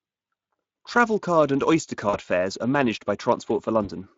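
Speex codec coding runs through the whole clip. This CELP speech codec has too few bits for the excitation signal, which fits a setting near 20 kbps, so the speech sounds plainly noisy and hoarse.

VoIP packet loss concealed by the speech codec occurs from 2.09 to 2.19 s and again from 3.83 to 3.90 s. The first gap fits two lost 20 ms frames and the second fits one. In each, the decoder stretches its last pitch and filter into a fading buzzy tone or coloured noise, and the speech stays weak and smeared briefly after packets resume.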